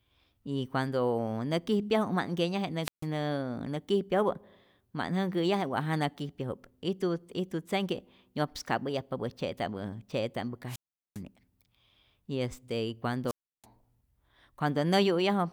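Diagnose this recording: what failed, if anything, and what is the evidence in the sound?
Wireless microphone squelch dropout in the analogue radio link. At 2.82–3.06 s, 10.67–11.21 s and 13.26–13.66 s, hiss swells, then the receiver's squelch mutes the fading FM signal for 145, 401 and 328 ms. Spectrograms show a broadband noise smear, then a blank gap.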